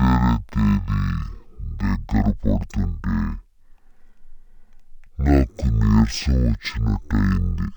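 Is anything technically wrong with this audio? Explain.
Yes. Throughout, this is stereo read as mono: left and right samples play consecutively as one channel, so speech runs at half speed and an octave low.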